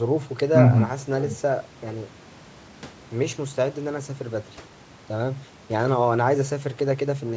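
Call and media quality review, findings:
No faults found.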